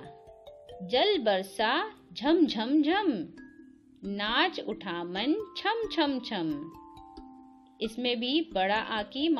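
Nothing technical stands out here, the audio runs along without a single glitch, dropout or distortion worth pointing to.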